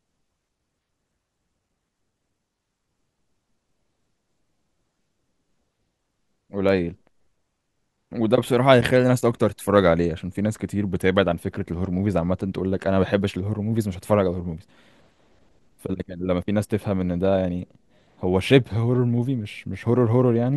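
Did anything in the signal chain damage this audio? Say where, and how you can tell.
No, nothing in the signal chain damaged this audio.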